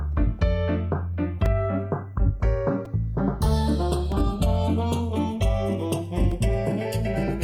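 From the start and running throughout, the two channels are drifting apart. Each side runs on its own clock, about 70 parts per million off from the other, so the inter-channel delay creeps upward and reaches a little under half a millisecond by the end. Summed to mono, this produces comb-filter notches that glide slowly through the spectrum, heard as a slow flanging. A spectrogram of the mono sum shows dark notch lines sweeping steadily across the frequency axis.

A repeated buffer occurs at 1.45 s, again at 2.85 s, at 4.12 s and at 6.31 s. Each time, fresh audio was late and the device replayed the last block, about 2.9 ms long, which fits a 128-sample buffer. The block replays twice more at 1.45 s, three more times at 2.85 s and once more at the last two. Because the block is so short, each event sounds like a click or a tiny buzz rather than an obvious stutter, with a few milliseconds of audio lost. 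The waveform shows identical short segments repeated with hard joins, and the spectrogram shows a thin vertical line at each join.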